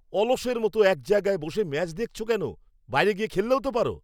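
No faults are audible anywhere in the recording; the speech runs continuously with no dropouts, clicks, distortion or timing irregularities to report.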